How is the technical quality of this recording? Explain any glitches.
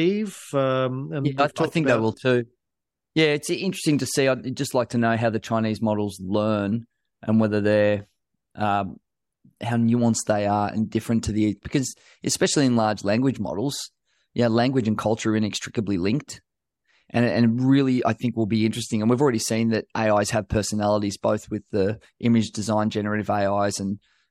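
The speech recording has no technical glitches to explain; the signal comes through intact throughout.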